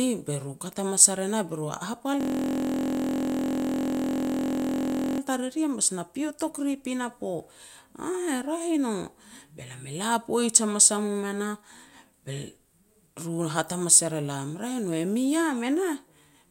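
From 2.21 to 5.20 s, a system hang loop replaces the speech with a steady buzz at about 43.1 Hz as the hardware replays one 23.22 ms block, which fits a 1024-sample buffer. The waveform shows that identical block tiling; the spectrogram shows flat harmonic lines 43 Hz apart.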